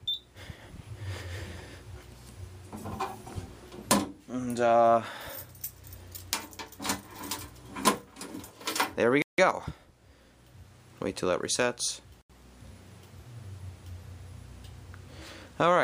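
At 9.22 s the sound drops to dead silence for about 0.16 s, and at 12.22 s it does so again for roughly 0.08 s; each time it resumes abruptly rather than fading back in. These gaps are most likely a Bluetooth stall: radio interference delayed packets on the wireless link, the receiving buffer emptied, and playback simply stopped until the retransmitted audio arrived, then carried on.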